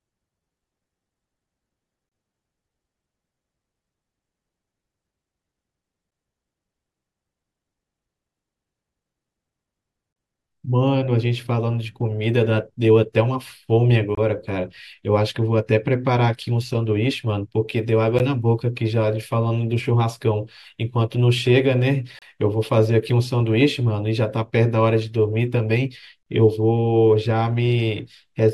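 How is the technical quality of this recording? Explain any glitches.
The speech has gaps between stream segments: brief hard-edged silences at 2.09–2.12, 6.11, 14.15–14.18, 18.19, 22.19–22.22 and 26.23–26.26 s. They fall on 4-second segment boundaries where timestamps don't quite meet, so the player pads about 12 to 35 ms of silence.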